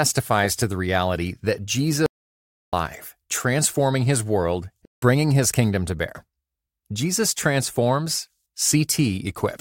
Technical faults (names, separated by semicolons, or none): audio dropout to silence; AAC frame loss with muting